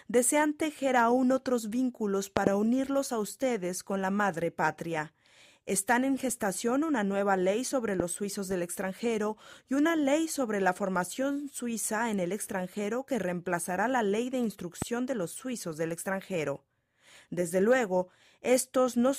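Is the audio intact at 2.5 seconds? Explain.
No, not quite. Between 2.37 and 2.49 s there is a loud pop, heard as two sharp pops in quick succession that stand out around 20 dB above the surrounding sound. The audio carries on underneath them, and the second pop ends just before 2.5 s. The likely cause is a sudden voltage step or pulse, from a plug, a switch, static or a driver glitch, entering the signal. The downstream circuitry then shapes the pulse.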